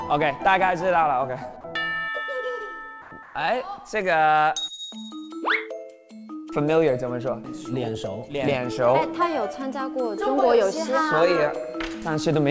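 From 3.02 to 3.11 s and again from 3.23 to 3.35 s, the background goes flat and featureless, about 2–3 dB quieter: likely comfort noise in place of the background.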